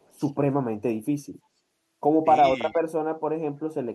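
Speech clip with a brief echo leak right at the start, from about 0.02 to 0.13 s: a faint delayed copy of the sound arrives roughly 327 ms behind the original, sitting very low, somewhere around 40 dB under the speech. It's a short scrap rather than a sustained echo. The likely cause is a far end on loudspeaker whose echo canceller let a bit of its mic pickup slip back down the line.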